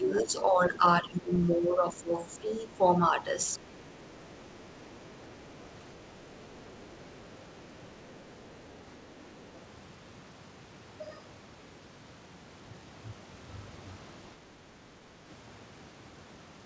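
From 0.0 to 3.17 s the talker's speech sinks by as much as about 15 dB for nearly the whole stretch, and a shorter dip of about 10 dB, lasting around 0.15 s in total, hits between 3.59 and 4.12 s. This is speech suppressed in double talk, likely caused by the echo canceller mistaking near-end speech for loudspeaker echo while both sides spoke and attenuating everything. On a waveform the envelope shrinks abruptly. On a spectrogram the harmonics fade as a block, thinning toward the top of the band, which ends at 8 kHz on this G.722 call path.

Overlapping that dip, from 3.78 to 5.63 s and again from 6.72 to 9.06 s, a faint second voice sits about 35 dB below the talker. A 40 ms scrap at 9.56 to 9.6 s reaches about 30 dB down. This is the other side's voice leaking through, likely residual echo from the loudspeaker that the canceller did not fully remove. A spectrogram shows weak, separate harmonic traces between or beneath the main speech, and on a waveform it is only a low ripple.

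At 14.81 to 14.87 s a final 70 ms suppression drops the speech by about 10 dB. On a waveform it shows as a brief notch in the envelope, and on a spectrogram as a narrow vertical gap across the harmonics.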